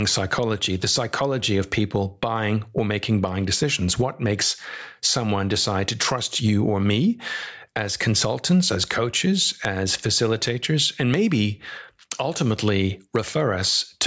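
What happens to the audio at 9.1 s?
At 9.1 s the speech is caught in the gain pumping that runs through the whole clip. The level swings by around 10 dB, most likely because the input gain is set far too high and a fast limiter clamps down on each loud syllable. Loud and soft parts end up closer in level, so the speech sounds squashed. On a waveform the peaks look flattened to one ceiling while the gaps bulge upward. A spectrogram shows the noise floor brightening between syllables, with nothing above 8 kHz from the call's band limit.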